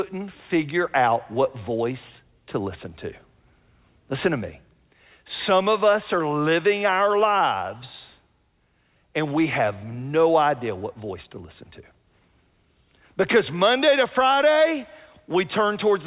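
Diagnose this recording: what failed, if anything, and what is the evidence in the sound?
Nothing failed in this recording.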